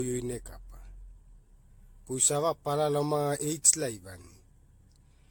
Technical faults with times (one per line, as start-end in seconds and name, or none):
0.00-5.31 generation loss